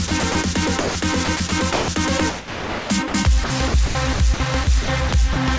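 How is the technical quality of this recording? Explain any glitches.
The recording has repeated gating faults. The sound cuts in and out, and synthetic hiss fills the gaps. It passed through a call path that leaves nothing above 8 kHz, which fits a wideband codec such as G.722.

Sound chopped by the voice detector occurs at 0.08 to 0.35 s, 1.25 to 1.88 s, 2.30 to 3.14 s, and 3.44 s to the end. About 90 ms, 240 ms, 660 ms and 510 ms of sound are replaced. The likely cause is the sender's detector switching on and off repeatedly. Each switch inserts comfort noise, so the audio sounds choppy.

Sound dropped by the voice detector occurs from 0.80 to 0.95 s. Here 150 ms of sound gives way to comfort noise. The likely cause is the detector mistaking quiet sound for background and stopping transmission until it triggered again.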